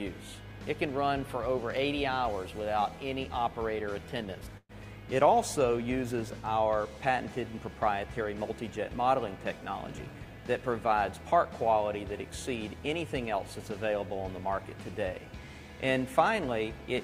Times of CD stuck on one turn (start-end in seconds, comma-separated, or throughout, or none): none